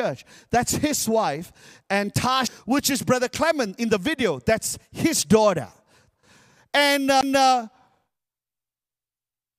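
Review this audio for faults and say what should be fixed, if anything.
Two CD skips break up the speech. The first is at 2.47 s, just before "which is". The second is at 7.21 s. Each is a short tick where the player goes silent, for about 5 ms the first time and about 15 ms the second. At each point the laser has jumped to a different turn of the disc's spiral. Playback then resumes from that new spot, so the speech lurches abruptly.

To prevent it, clean the disc and re-rip it on a steady, vibration-free drive with an error-checking ripper.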